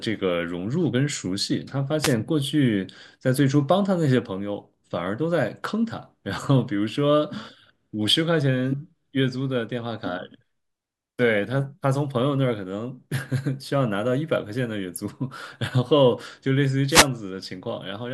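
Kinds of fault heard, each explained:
Wireless microphone noise hit: the radio link from the mic fades briefly, so receiver static swishes over the speech, at about 2.01 s and 16.88 s.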